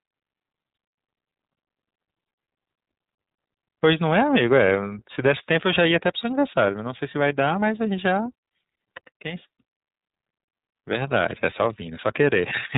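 From start to finish the speech carries the sound of the iLBC codec. Nothing above 4 kHz survives, so sibilants lose their edge, and the coding damage is plainly audible as a rough, slightly synthetic grain. The codec codes each block of excitation on its own, in a framing that points to 30 ms blocks at about 13.33 kbps. A plain 4 kHz low-pass would only dull the treble. Here the graininess comes from the coding itself.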